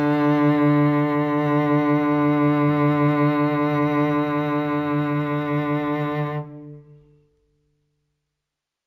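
Throughout the music there is imaging from linear upsampling. The 16 kHz material was raised to 44.1 kHz by straight-line interpolation, dulling the top near 8 kHz. A faint mirror image, about 45 dB down, fills 8 to 16 kHz on a spectrogram, adding a slight metallic shimmer.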